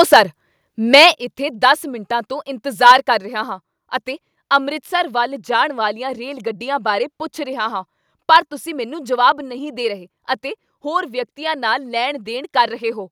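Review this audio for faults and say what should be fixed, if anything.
Microphone overload occurs at 0.0–0.2 s, 0.93–1.07 s, 2.86–2.92 s after "ਮਿੰਟਾਂ ਤੋਂ", and 8.33–8.37 s after "ਬਾਰੇ ਪੁੱਛ ਰਿਹਾ ਹਾਂ". Peaks overshoot the converter's limit by about 2 to 6 dB. Their tops are flattened, giving a harsh crackle. Input gain was likely set too high.

The microphone volume stepped down at 0.14 s and again at 1.14 s. Speech and background drop abruptly, first by about 3 dB, then by about 6 dB. Software likely lowered the input level after detecting clipping.

Set the microphone input lower before recording, so peaks stay well below full scale and no automatic correction is triggered.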